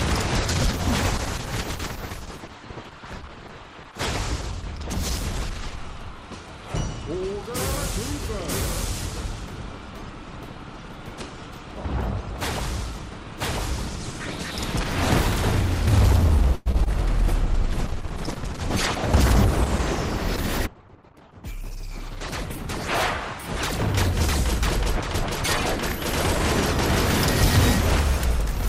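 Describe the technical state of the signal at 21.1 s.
At 21.1 s a call bitrate drop is under way, from 17.34 to 25.19 s. The encoder falls from 96 to 11 kbps. The sound turns coarse, watery or muffled.

A jitter buffer speed-up also runs from 20.67 to 21.19 s. The receiver cuts repeated pitch-period slices, about a tenth of a second in total. The audio plays hurried, at 116% speed without a pitch change.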